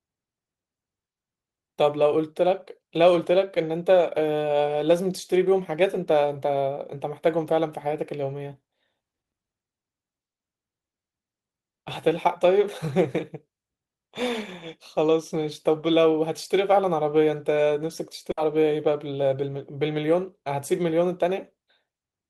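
At 10.33 s and again at 18.31 s there's a burst of packet loss in this speech, each one running about 90 ms. A run of packets never made it in time, so the receiver kept stretching the last bit of sound for roughly 60 ms, fading it down into a short buzz or hiss. Then it jumps back in with about 60 ms of the original just gone, so each spot sounds like a brief smeared stumble.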